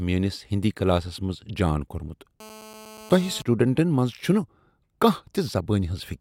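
From 2.40 to 3.42 s, just after "كلاسس منز جان كوٚرمُت", a GSM phone buzz cuts in. A nearby 2G handset in a call pulses at about 217 Hz, and the audio circuit rectifies those pulses. The result is a hard, raspy, harmonic-rich buzz about 20 dB below the speech. Mains hum is smoother and sits at 50 or 60 Hz, which sets it apart from this buzz.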